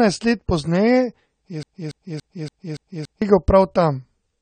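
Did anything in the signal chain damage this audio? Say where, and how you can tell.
Yes. Throughout, nothing sounds above 9 kHz. The speech is dull and smeared. This is likely AAC compression at the codec stage, fitting roughly 32 kbps.

From 1.63 to 3.22 s, a 285 ms piece repeats six times. This broken-record loop likely comes from stalled playback re-sending its last fragment.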